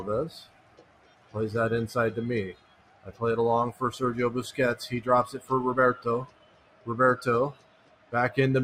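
A noise suppressor applied to music or sounds runs through the whole clip. Tuned for speech, it treats steady, sustained material as noise and keeps pulling it down, so the level swings by roughly 20 dB as the gain reacts. The sound pumps and thins. On a waveform the envelope breathes unevenly. On a spectrogram, onsets stay bright while sustained bands fade and flicker behind them.

The sound is cut by the noise suppressor hardest at 0.34 to 1.35 s, 2.53 to 3.21 s, 5.35 to 5.51 s, 6.25 to 6.87 s and 7.52 to 8.13 s, with drops of about 15 dB and about 12 dB in the short 5.35 s dip. The longest stretch lasts about a second, and the others last well under one. Held portions and decays sink while sharp starts survive. A waveform shows the envelope collapsing soon after each attack, and a spectrogram shows the tails shortened and darkened.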